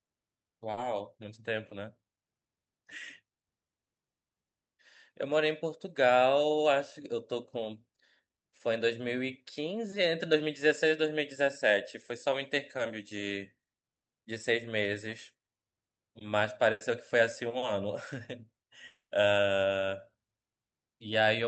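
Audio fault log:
0.71–0.80 s and 16.72–16.84 s, burst of packet loss: the last sound gets stretched into a fading buzz or hiss for 60 and 90 ms, then playback jumps ahead, skipping 40 and 80 ms.
18.87–19.13 s, long network dropout: the last sound is held and faded, ending in 130 ms of silence, about 230 ms in all, and 200 ms never comes back, likely a stall in packet delivery.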